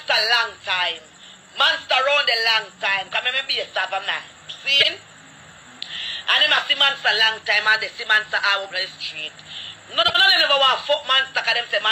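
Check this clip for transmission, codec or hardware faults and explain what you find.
Two short faults of one kind are present. Frames out of order at 4.80 to 4.87 s and 10.03 to 10.16 s. Adjacent blocks of about 26 and 52 ms play swapped, giving a garbled flutter.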